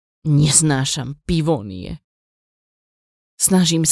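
No technical fault can be heard anywhere in the speech; the signal stays continuous and steady throughout.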